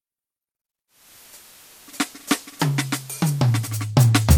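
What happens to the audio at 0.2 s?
Nothing goes wrong at 0.2 s; the music plays through that moment intact, with no dropout, click or other audible fault.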